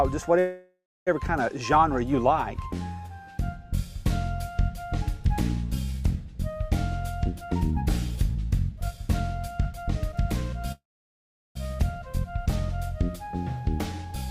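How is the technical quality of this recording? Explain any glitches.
The recording has three glitches: two call audio freezes and one jitter buffer speed-up.

From 0.39 to 1.09 s and again from 10.72 to 11.57 s, the sound stalls into a fading buzz, then dies to near silence (about 0.27 s and 0.75 s of it). When it resumes, nothing is missing. This is likely a call audio freeze, where delayed packets emptied the jitter buffer.

From 7.27 to 10.53 s, the audio runs about 13% fast at unchanged pitch and sounds hurried. This is a jitter buffer speed-up: the receiver trimmed roughly 0.4 s of pitch periods to shed excess delay.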